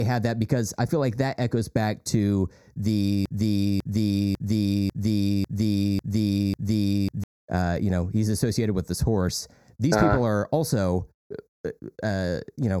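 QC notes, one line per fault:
Throughout: channel delay (comb filtering). The speech sounds hollow and phasey because one channel lags by a fraction of a millisecond, and the mono sum notches from around 3 kHz.
3.26–7.24 s: broken-record loop. After "echoes back to the", a 0.55 s fragment repeats seven times back to back, likely from a stalled stream resending its last fragment.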